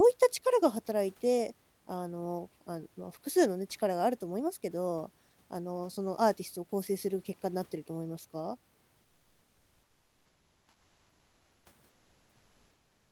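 A speech clip in which the sender likely stopped transmitting during pauses (Opus discontinuous transmission), leaving the receiver to fill the gaps with comfort noise in place of the background. From 9.01 to 11.65 s and again from 11.89 s to the end, the real room noise, sitting about 41 dB below the speech, gives way to a steady, featureless hiss, about 2 dB and then about 1 dB quieter than the genuine background.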